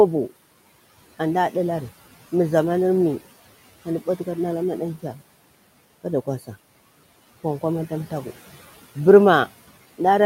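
Noise suppressor artifacts run through the whole clip: the suppressor pulls the room noise, which sits about 20 dB below the speech, down by roughly 15 dB between words and lets it rise under them, so gaps look nearly empty on a spectrogram while noise pumps back in with each phrase.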